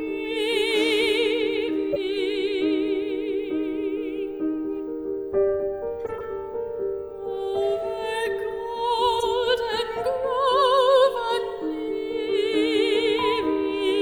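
Three short bursts mark corrupt frames that were decoded anyway. At 1.93 to 1.97 s there is a sharp chirp peaking near -10 dBFS, which fits about two damaged frames. From 6.06 to 6.25 s a longer, quieter squeak runs for roughly seven frames, near -20 dBFS. At 9.18 to 9.23 s a blip reaches about -15 dBFS. In each burst, flipped bits made the decoder misread gains and codes, so energy landed at the wrong frequencies.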